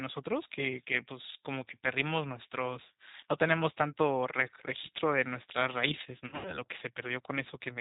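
Throughout, the speech sounds slightly rough and synthetic with nothing above 4 kHz, the plainly audible mark of the G.729 codec rebuilding the voice from a filter and pulses at 8 kbit/s. From 6.27 to 6.57 s, the voice smears into a fading buzzy tone or coloured noise and stays weak or distorted afterwards: VoIP packet loss concealed by the speech codec, with about 140 ms lost across 180 ms, the longest gap 90 ms.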